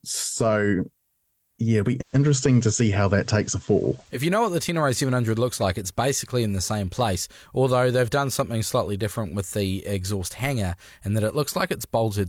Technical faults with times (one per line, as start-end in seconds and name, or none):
1.99-4.21 digital radio blending to analogue